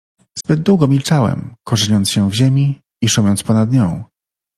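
From 0.38 to 0.46 s, AAC frame loss with muting: a decoder-zeroed frame fades speech out and in, showing a tapered waveform gap and blank spectrogram band.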